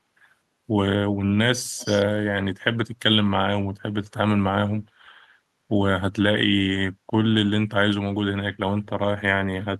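An echo canceller at a loudspeaker end likely failed to remove what its microphone picked up, so from 1.78 to 2.04 s an echo leak sends back a faint copy of the speech 292 ms late, roughly 15 dB below the direct signal.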